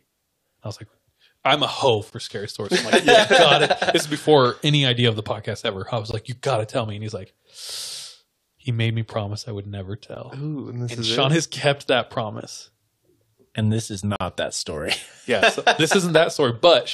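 Gap between stream segments at 2.10–2.12 s, 6.11–6.14 s, 10.15 s and 14.16–14.21 s: each time one segment ends, the next begins slightly late, and the player pads the hole with silence. The speech drops out abruptly with hard edges, for about 19, 21, 13 and 45 ms, at a steady 4-second rhythm that matches the segment length. Nothing is cut from the speech itself. Time is simply inserted, so each word resumes intact after the dropout.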